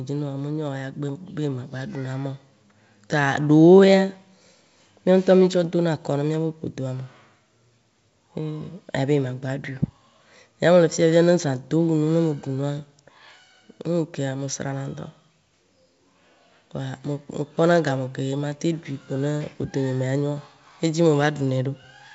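A speech recording carried over G.722 wideband telephone coding at 64 kbit/s, with nothing technically wrong to report.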